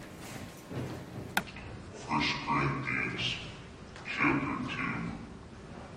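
From 1.40 s to the end, a section at the wrong speed takes over. Playback runs at 0.641 times the original rate, so everything slows and drops by about seven semitones together. The sound turns deep and sluggish. A likely cause is a clock mismatch in editing or playback.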